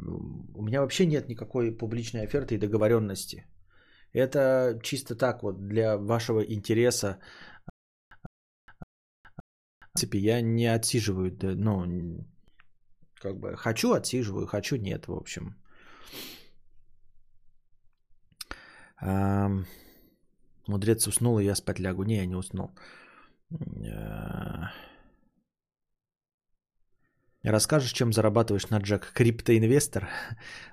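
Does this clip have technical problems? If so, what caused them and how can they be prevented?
Yes. A stutter with silent gaps runs from 7.70 to 9.97 s: an identical 152 ms block repeats four times, separated by 416 ms flat, blank gaps. This is likely a stalled stream replaying its last fragment. A larger playback buffer and a steadier network connection would prevent the stall.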